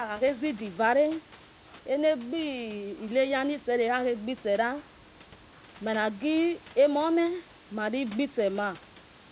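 No technical faults are audible.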